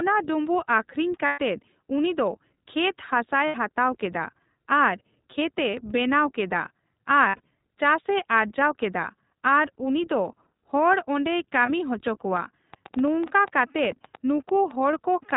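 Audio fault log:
Throughout: iLBC codec. The audio was squeezed through a narrowband VoIP codec whose sound fits iLBC's 15.2 kbps mode with 20 ms frames, so nothing above 4 kHz survives and the speech comes out clear but plainly rough and synthetic.
1.26–1.39 s, 3.46–3.56 s, 7.28–7.40 s, 11.66–11.70 s: lost iLBC frames. Packets went missing right after "ᱰᱩᱸᱵᱩᱜ ᱟᱹᱠᱷᱨᱤᱧ" (about 120 ms), then about 80 ms, then losses scattered over about 160 ms with the longest gap around 70 ms, then a brief 20 ms dropout. The decoder fills each gap by repeating the last pitch cycle blended with noise, which sounds like a held, buzzy vowel. Clean speech resumes almost at once because each frame decodes independently.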